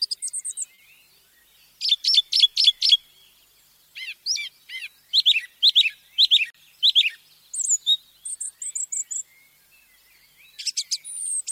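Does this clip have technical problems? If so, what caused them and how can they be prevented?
Yes. Clock drift between sender and receiver runs through the whole clip: the sending clock is about 3 percent slower than the receiver's. The receiver's buffer therefore keeps draining, which causes the corrections below. Locking both ends to a common clock, or resampling adaptively at the receiver, prevents this.

Short stalls from late packets occur at 0.74–0.79 s, 2.10–2.14 s and 6.50–6.55 s. Each time, a packet arrived late, the buffer ran dry, and the last sound was held for 40, 30 and 40 ms before playback resumed with nothing lost. A slightly deeper jitter buffer would absorb these delays.

Repeated timing corrections run from 2.98 to 11.44 s. The receiver keeps inserting small repeated pieces to match the slow sender, so playback runs at 98 percent speed, stretched by around a fifth of a second overall, with the edits unevenly spaced. 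Correcting the clock rate itself avoids these edits.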